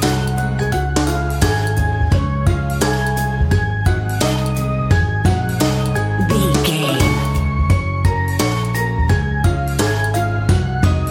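No technical faults can be heard anywhere in this audio.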